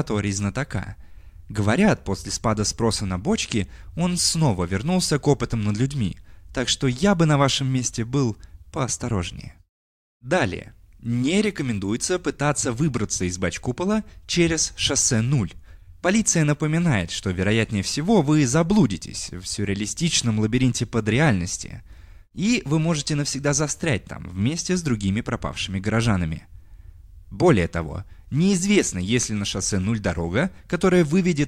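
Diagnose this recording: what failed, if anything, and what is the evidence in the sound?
Nothing failed in this speech recording. No event in the sound can be timed or traced to a failing stage of the chain.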